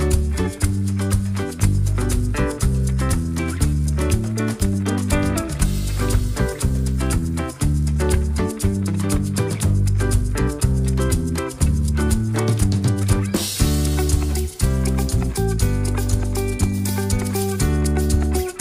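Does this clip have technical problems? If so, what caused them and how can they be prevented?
No, nothing stood out as a technical problem on listening to this clip.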